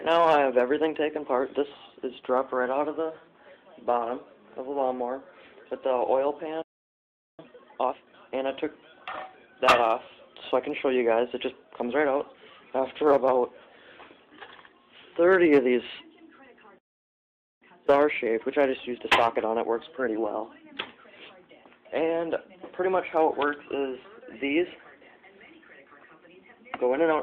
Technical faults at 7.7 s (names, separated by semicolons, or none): time-compressed catch-up